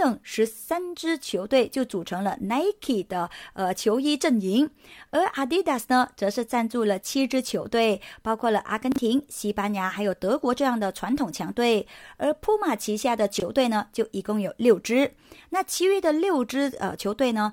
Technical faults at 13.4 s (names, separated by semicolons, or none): chunks out of order